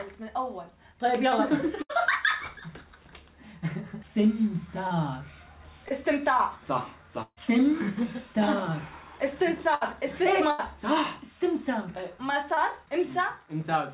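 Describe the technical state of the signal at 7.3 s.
At 7.3 s you're inside a burst of packet loss running from 7.22 to 7.39 s. The receiver stretches the last sound for about 140 ms, fading it down and then going quiet, so roughly 140 ms of real audio is skipped before playback resumes, all within the call's 4 kHz band.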